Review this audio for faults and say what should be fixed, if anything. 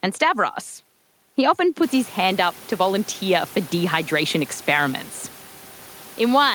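Nothing needs fixing; the room's background noise comes up by about 20 dB at around two seconds but stays about 23 dB below the speech, which is the recording environment rather than the system.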